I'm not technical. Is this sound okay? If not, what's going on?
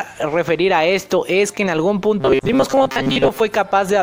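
No. From 2.20 to 3.40 s the sound turns into a stiff, metallic buzz at 134 Hz. This is robotic sound from repeated short buffers: audio likely arrived too slowly, so about half was replaced by repeated tiny slices, producing a steady buzz rather than gaps or clicks.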